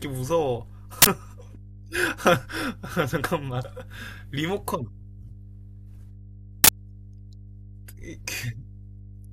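Mains hum runs through the whole speech clip as a steady 50 Hz drone, roughly 15 dB below the speech. It comes from the power line leaking into the signal through a ground loop or nearby transformer, and its fixed pitch and constant level set it apart from broadband hiss.

At 1.02 to 1.07 s and again at 6.64 to 6.69 s, an uninitialised buffer produces a harsh, loud burst of digital noise lasting about 46 ms, which fits a 2048-sample block. Leftover memory was played as if it were audio. Unlike a dropout's silence or a click's single spike, each burst fills one whole block with noise.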